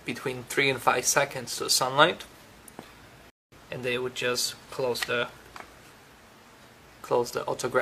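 At 3.3 s the audio drops out to silence and picks up again at about 3.52 s, right from the point where it stopped, so nothing goes missing but roughly 220 ms of dead air gets added. That's a classic rebuffering stall: the player used up what it had downloaded, paused while it waited for more data, then carried on once the next chunk turned up.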